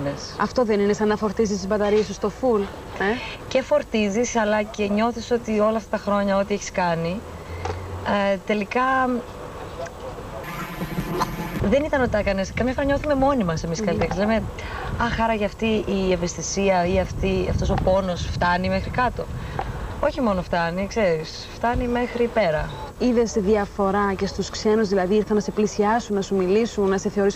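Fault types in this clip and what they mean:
Planar audio read as interleaved: each block stores all left samples followed by all right samples, but is decoded as alternating left-right pairs, so every block replays twice at double speed. From 10.44 to 11.60 s the blocks are only 11.6 ms long, which fits a 512-sample block, so the result is a robotic buzz at about 86 Hz rather than an octave jump. A spectrogram shows vertical striations spaced 11.6 ms apart, and the waveform shows a sharp seam at every block edge.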